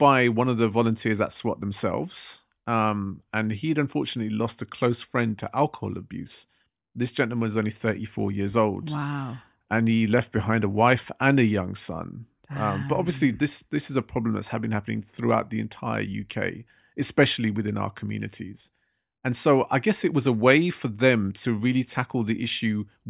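No technical faults can be heard anywhere in the speech recording; the signal stays intact and steady throughout.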